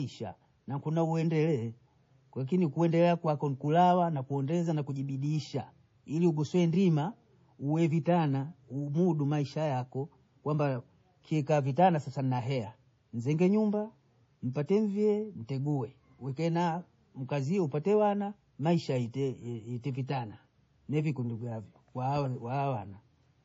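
Throughout, the speech sounds watery and swirly, with weak high components flickering on and off between frames and the treble cut off. This heavy damage is likely MP3 compression, fitting a low bitrate around 32 kbps. Unlike background noise, it moves with the speech itself.

At 20.07 s, a short hiss of about 18 ms runs just ahead of a sharp attack. This is pre-echo: the codec spread its quantisation noise across the whole block, including the quiet moment before the onset. Unlike a click, it sits before the attack and softens it. Room noise stays about 50 dB below the speech.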